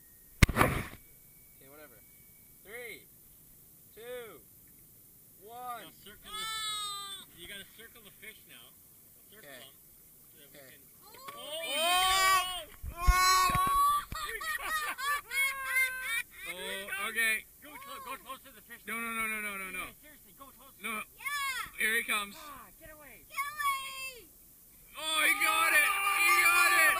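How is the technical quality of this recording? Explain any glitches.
The technical quality is limited by one fault running through the whole recording: low bit depth with noise shaping, at 9 bits. The coarse rounding error is fed back and pushed upward, so a thin, steady hiss, roughly 20 dB below the signal, climbs sharply toward the top of the band. Unlike ordinary broadband hiss, it thins out at low frequencies.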